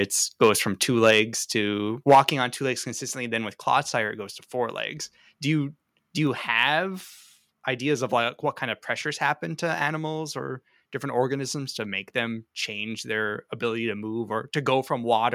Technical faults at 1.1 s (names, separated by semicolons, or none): microphone overload; microphone volume stepped down